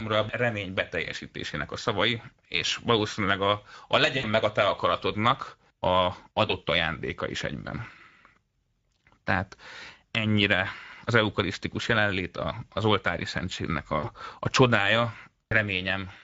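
Across the whole speech clip, Speex codec damage is plainly audible: hoarse, noisy texture from a starved excitation, which fits a middle setting near 16.8 kbps. A spectrogram shows blurred harmonics.

VoIP packet loss concealed by the speech codec occurs four times. At 4.17 to 4.25 s, between "és valószínűleg a a" and "meg a te akaratodnak", about 60 ms was lost. The decoder stretched its last pitch and filter into a fading fill. At 6.47 to 6.52 s, before "ajándéka is egyben", a short 20 ms loss leaves a brief smear. At 13.99 to 14.09 s, after "a az oltári szentségnek", about 40 ms of fill decays. At 15.50 to 15.55 s there is one more 20 ms patch. The waveform shows a shrinking envelope and weak recovery just after each gap.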